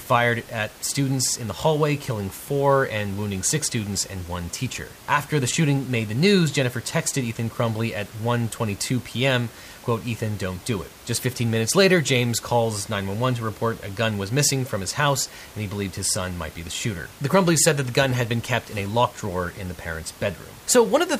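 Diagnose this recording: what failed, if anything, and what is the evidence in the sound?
Nothing in the signal chain has failed: the speech carries a steady layer of room noise sitting about 22 dB below it, which belongs to the recording space rather than to any stage of the system.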